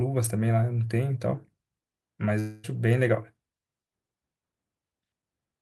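At 2.39 s the speech stops arriving and the receiver stretches the last sound into a fading buzz for about a quarter second. It picks up again at 2.72 s with a tiny bit skipped, likely a long network dropout.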